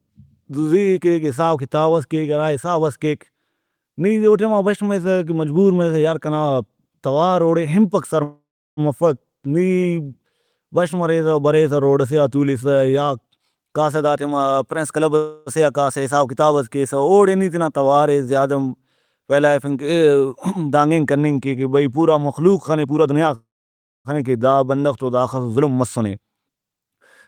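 Call audio freeze hits this speech clip at 8.23–8.80 s after "توار اوڑے ہنپک سر", at 15.16–15.49 s, and at 23.35–24.08 s before "خنے کہ دا بندغ". Each time the last sound trails into a fading buzz (silence for 0.34 s and 0.59 s in the first and third) before speech resumes unbroken, adding 0.54 s, 0.3 s and 0.7 s of delay, likely from packets stalling and the jitter buffer draining. Jitter buffer speed-up also occurs at 12.98–15.11 s, running between "روڈ ئسے آ تولسہ" and "سے آ کاسہ حساب" at 117% speed, at 22.85–23.30 s at 128%, and at 25.61–26.99 s at 111%. Pitch-period slices are trimmed to shed the built-up delay, roughly 0.4 s in the first and about 0.15 s in each of the others, so speech sounds hurried at unchanged pitch.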